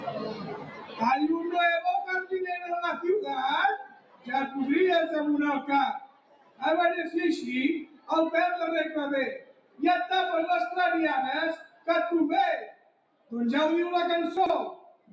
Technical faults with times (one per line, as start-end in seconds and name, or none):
0.00-15.12 noise suppressor applied to music or sounds
0.00-1.02 sound cut by the noise suppressor
3.80-4.29 sound cut by the noise suppressor
5.99-6.63 sound cut by the noise suppressor
7.84-8.10 sound cut by the noise suppressor
9.38-9.82 sound cut by the noise suppressor
11.56-11.88 sound cut by the noise suppressor
12.66-13.32 sound cut by the noise suppressor
14.37-14.50 chunks out of order
14.75-15.12 sound cut by the noise suppressor